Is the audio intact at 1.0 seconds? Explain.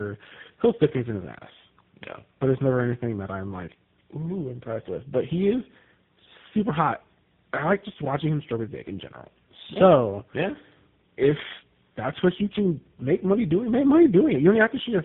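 No. At 1.0 s, as across the whole clip, tandem speech coding degrades the speech: it sounds re-encoded several times, which fits about three low-rate speech codecs in a row, each compounding the last. Unlike a single codec, it is rougher, more muffled and warbly, with nothing above 3.8 kHz.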